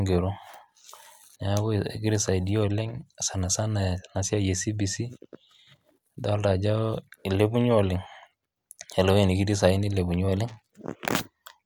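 A speech clip with a drift correction step: from 10.28 s to the end at 11.65 s, playback runs 5.87% faster and about a semitone higher (98.8 cents), likely a clock-matching resampler jumping rate to rebalance its buffer. On a spectrogram the harmonics and formants step upward together at 10.28 s, and the waveform's periods visibly shorten.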